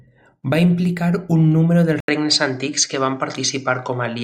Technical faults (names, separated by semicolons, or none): input switched to a poorer device